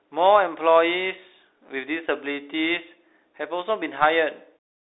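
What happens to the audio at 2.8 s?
At 2.8 s the speech is passing through a Bluetooth CVSD headset codec, as it does for the whole clip. The line band runs from about 300 Hz to 3.7 kHz, and nothing above 3.8 kHz survives. CVSD sends one bit per sample to say up or down, with an adapting step, which fits a 64 kbps link. Sharp loud sounds outrun that step and distort. S sounds turn scratchy. A granular hiss sits underneath.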